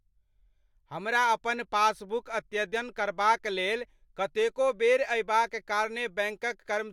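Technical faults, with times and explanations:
No technical faults are audible in this speech.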